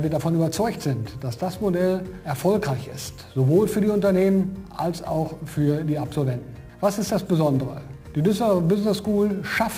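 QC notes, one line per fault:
throughout, sample clock jitter: a grainy hiss that rises with loud, bright passages, because a clock wandering around 10 microseconds mistimes samples, leaving error roughly 25 dB below the signal.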